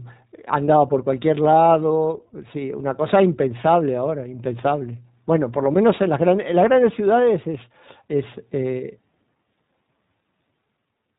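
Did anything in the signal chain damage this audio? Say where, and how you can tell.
Yes, at the codec stage: the speech has gone through iLBC across the whole clip. Nothing sounds above 4 kHz, and the audible rough, synthetic graininess fits independent 20 ms frame-by-frame excitation coding at the 15.2 kbps rate.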